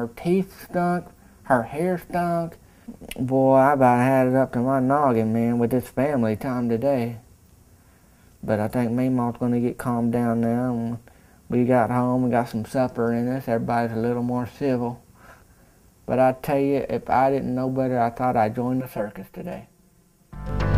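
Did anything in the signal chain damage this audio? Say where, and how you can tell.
Yes. From 18.81 s to 20.49 s the sound turns hollow and phasey, the signature of channel delay (comb filtering) introduced at the driver or buffer stage before a mono fold-down. One channel runs around 5 ms behind the other, so summing them cancels shared content in fixed notches starting near 100 Hz and repeating about every 200 Hz. Unlike a phaser or flanger, the notches never sweep.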